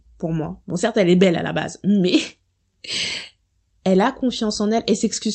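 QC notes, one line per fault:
No faults found; the speech passed through an Opus call path working as intended, with content extending to about 8 kHz.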